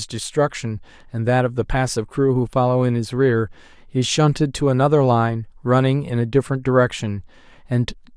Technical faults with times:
none

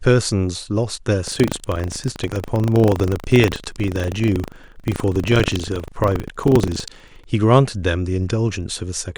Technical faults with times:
1.24-7.28 buffer tearing

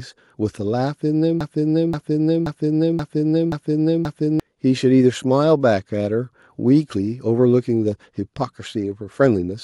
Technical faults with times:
1.41-4.40 broken-record loop

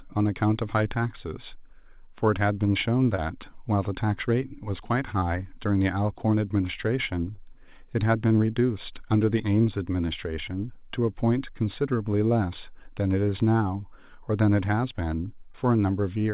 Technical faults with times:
3.16-3.20 short concealed packet loss
5.20-5.24 short concealed packet loss
7.36-7.40 short concealed packet loss
15.52-15.56 short concealed packet loss

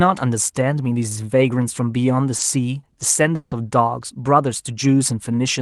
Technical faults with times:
2.37-2.41 short concealed packet loss
3.35-3.53 long network dropout

